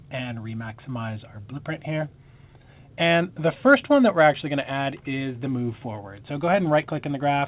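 At 3.54 s there is a short concealed packet loss, lasting until about 3.58 s. About 20 ms of audio arrived too late. The receiver covered roughly 15 ms of the hole by extending the preceding sound. It is heard as a brief smear or wobble, against a band that stops at 4 kHz.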